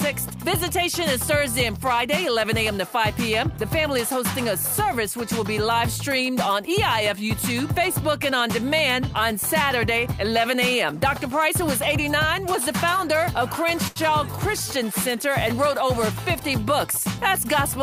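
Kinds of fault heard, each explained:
Short stall from a late packet: at about 13.87 s a packet simply hadn't shown up in time, so the jitter buffer drained and the receiver kept stretching the last bit of sound for around 85 ms until the data arrived, through to roughly 13.99 s. Nothing actually gets dropped. Playback picks up exactly where it left off, just 85 ms later than before, so what you hear is one moment held a touch too long with a slight buzz or dip.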